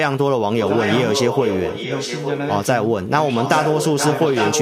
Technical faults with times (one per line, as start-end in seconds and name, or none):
0.48-0.58 speech suppressed in double talk
0.62-2.51 echo leak
3.40-4.62 echo leak